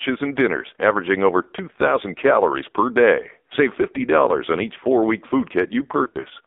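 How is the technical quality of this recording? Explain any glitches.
The speech is heavily degraded throughout, with a brief break near the end.

Across the whole clip the speech sounds buzzy, thin and synthetic, confined to a band from about 250 Hz to 3.7 kHz. This is the AMR narrowband mobile codec at a very low rate, which fits a mode near 6 kbps. It rebuilds each voice from a vocal tract model and sparse pulses, discarding detail.

From 6.04 to 6.26 s the speech flutters, dips and turns rough. These are lost AMR speech frames. About 100 ms of audio is missing across a 200 ms span, in runs of up to 40 ms. The decoder repeats its last pitch and tract settings at falling gain to fill those gaps.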